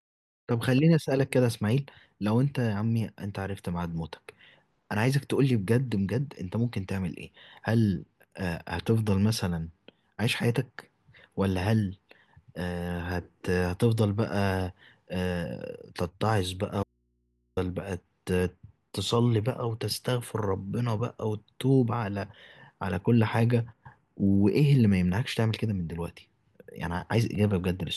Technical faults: audio dropout to a faint residue

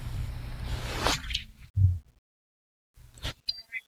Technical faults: none

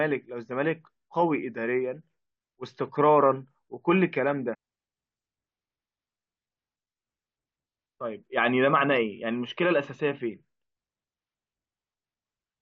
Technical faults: stream segment skipped

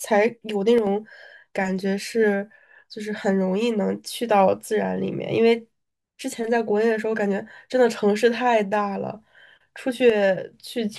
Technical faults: one channel drops out

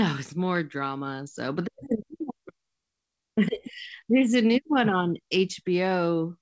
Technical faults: none

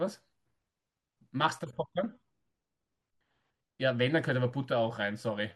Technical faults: none

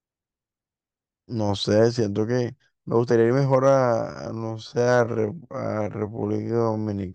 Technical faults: time-stretched section

